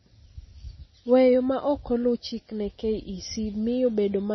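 Throughout the speech, the treble stops dead near 5.9 kHz. Weak detail flickers in and out, giving a watery, swirling texture. The damage is heavy. This is likely MP3 compression, which fits a bitrate of about 24 kbps.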